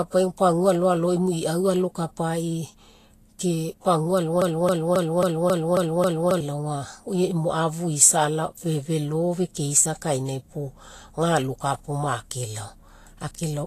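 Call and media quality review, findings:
Grainy, hissy treble across the whole speech clip, plainly audible, nothing above 14.2 kHz; likely Vorbis compression at a low bitrate, consistent with around 35 kbps.

Broken-record loop at 4.42–6.41 s: a 270 ms fragment repeats back to back, seven times, replacing the intended audio; likely a player, encoder or stream stall resending its last buffer.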